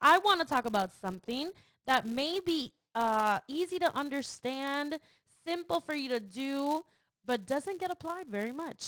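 Throughout the speech, a filter restarted on every block drops its stored state and begins each block from silence, leaving a small transient that repeats as a 200 Hz buzz, which fits 5 ms blocks. The buzz rises and falls with the voice's level, alongside the light damage of the Opus voice compression. A spectrogram shows harmonic lines at multiples of 200 Hz, and the waveform shows evenly spaced ticks.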